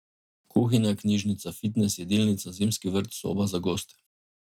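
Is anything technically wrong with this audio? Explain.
No, there are no faults.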